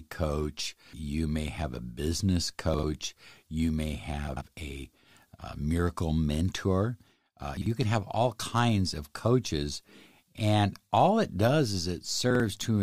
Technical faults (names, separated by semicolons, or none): chunks out of order